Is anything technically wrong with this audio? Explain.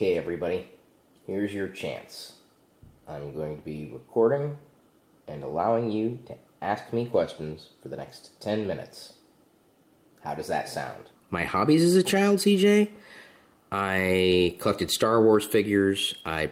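No, nothing technically wrong can be heard in this audio; the signal comes across as technically sound throughout.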